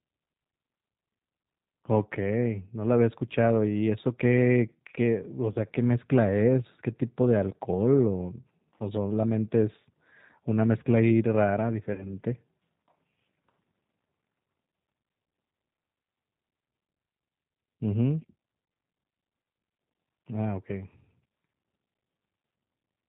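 Throughout the clip the speech carries the G.729 codec sound: nothing above 4 kHz, and a slightly rough, synthetic edge from rebuilding the voice out of a vocal tract filter, pitch predictor and sparse pulses. This fits an 8 kbit/s coder. Unlike a plain low-pass filter, it roughens the texture and not just the brightness.

At 5.52 s, VoIP packet loss concealed by the speech codec takes out about 20 ms of audio, which fits one lost packet. The decoder stretches its last pitch and filter into a brief, fading buzzy tone or coloured noise. Unlike a dropout, there is no silence or click, and the voice stays weak until about 5.56 s.

From 11.94 s to 12.14 s a longer concealment covers about 40 ms lost, which fits two packets. The extrapolated sound fades further, and the voice takes until about 12.14 s to recover fully because each decoded frame builds on the damaged one before it.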